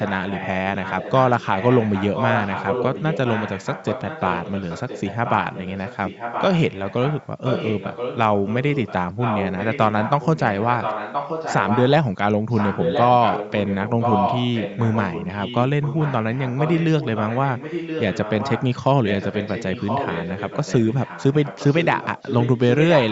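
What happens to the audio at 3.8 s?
At 3.8 s you're right in the middle of an echo leak running from about 0.74 to 8.18 s. A second copy of the speech trails the original by roughly 1.02 s, sitting around 10 dB quieter. It's likely the far end was on a loudspeaker and its echo canceller didn't fully cancel what its mic picked up, so that residue got sent back down the line and lands on top of the live talk.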